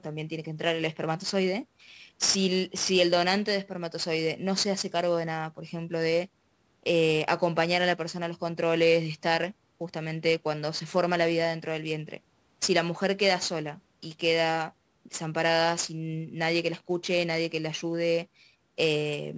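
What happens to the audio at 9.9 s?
At 9.9 s, as across the whole clip, sample clock jitter of around 10 microseconds mistimes samples, leaving roughness only about 15 dB below the speech that swells on loud, bright sounds and vanishes in pauses, unlike steady hiss.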